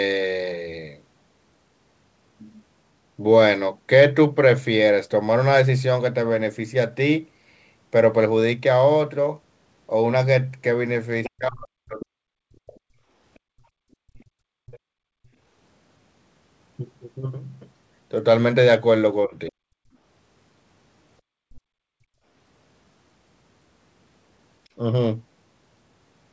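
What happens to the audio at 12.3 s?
Speech suppressed in double talk runs from 11.27 to 12.85 s, with the speech sinking by roughly 40 dB at its deepest. The likely cause is an echo canceller that, with both sides talking, mistook this talker for loudspeaker echo and turned it down.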